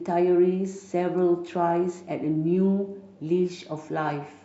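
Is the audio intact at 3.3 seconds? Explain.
Yes, at 3.3 seconds the speech plays through cleanly, with no dropout, click, distortion or other fault to be heard at that moment.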